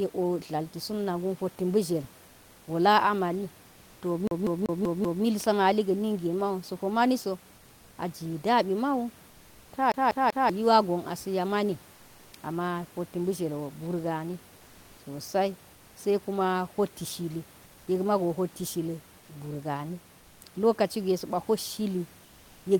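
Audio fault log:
4.27–5.24 s and 9.92–10.50 s, CD stuck on one turn: the same 0.19 s slice of speech repeats five times, then three times, with a brief mute at each jump. This is the even, rapid stutter of a laser knocked back one track per disc revolution.
19.19–19.29 s and 20.19–20.41 s, comfort noise in place of the background: for 100 ms and then 220 ms, the room noise, about 30 dB below the loudest speech, gives way to a flat, detail-free hiss about 1–2 dB quieter. This is likely Opus DTX filling transmission pauses with synthetic noise.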